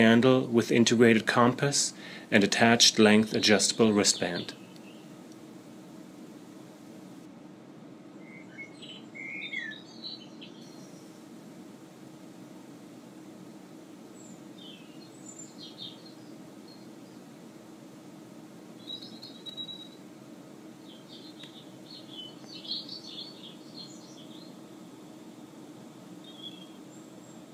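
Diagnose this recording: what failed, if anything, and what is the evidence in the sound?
From 7.26 to 10.61 s the sound turns dull and muffled, about 8 dB down at 10 kHz relative to 1 kHz: de-emphasis applied wrongly in processing, a treble-cut filter engaged without matching pre-emphasis. The smooth, gradual slope sets it apart from a codec's sharp low-pass cutoff.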